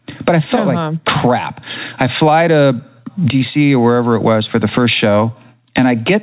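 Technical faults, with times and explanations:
Throughout: gain pumping. The gain ducks by roughly 15 dB under each loud syllable and recovers in the pauses, likely from excessive mic gain hitting a fast limiter, unlike a gate's abrupt cut.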